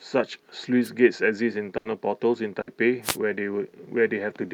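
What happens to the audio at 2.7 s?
A burst of packet loss runs from 2.61 to 2.69 s. The receiver stretched the last received sound over about 60 ms, fading it into a held buzz or hiss, then speech resumed with about 60 ms skipped. Spectrograms show smeared, decaying bands before an abrupt restart.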